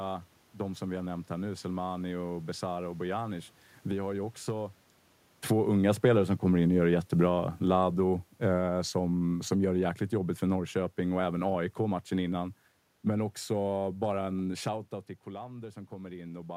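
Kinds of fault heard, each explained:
Automatic gain falling: the automatic gain control judged the input too loud or its background noise too strong and pulled its gain down step by step instead of all at once, taking it down by about 8 dB between 5.54 and 12.41 s. The speech sinks steadily over those seven seconds, and the room noise behind it sinks by the same amount, which shows the drop came from the gain stage rather than the talker.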